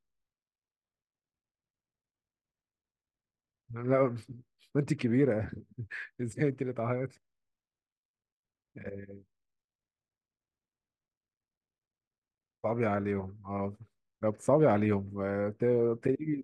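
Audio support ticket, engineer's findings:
Listened through the speech recording; nothing stood out.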